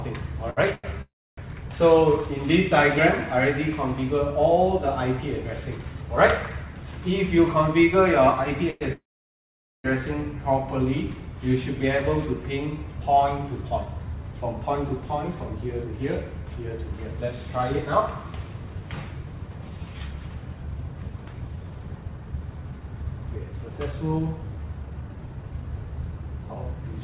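The audio passed through a call path whose band stops at 4 kHz, which fits narrowband G.711 A-law at 64 kbps. Two short stalls from a late packet occur at 0.50 to 0.60 s and 0.75 to 0.87 s. In each, the receiver held the last sound for 67 ms and then 88 ms until the packet arrived. On a spectrogram these appear as brief stretches of frozen, smeared harmonics, and the rest of the audio is simply shifted later.

Three call audio freezes follow, likely caused by packets held up in transit while the jitter buffer ran empty. At 1.02 to 1.40 s the last sound is continued as a fading buzz or hiss and then 290 ms of silence. At 8.70 to 8.84 s a 102 ms fade occurs without reaching silence. At 8.93 to 9.87 s there is a 915 ms gap, 830 ms of it silent. In the waveform these appear as decaying tails that drop to flat silence where the silence is noted. Nothing is lost; the gaps are inserted.

Jitter buffer speed-up occurs at 7.39 to 8.04 s at 107% speed, removing about 50 ms. 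It occurs again at 20.94 to 27.01 s at 112%, removing roughly 700 ms. The receiver cut repeated pitch-period-sized pieces to shrink its backlog, so the audio sounds hurried at unchanged pitch. On a spectrogram the events are compressed in time while the harmonic spacing stays the same.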